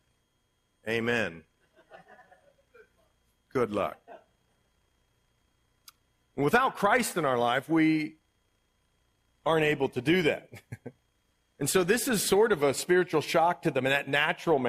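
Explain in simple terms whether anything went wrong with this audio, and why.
Nothing stood out as wrong when listening to this recording.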